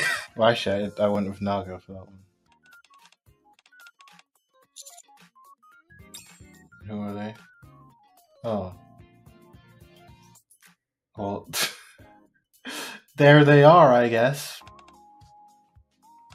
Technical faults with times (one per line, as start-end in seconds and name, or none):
0.00-16.34 noise suppressor applied to music or sounds
1.79-3.30 sound cut by the noise suppressor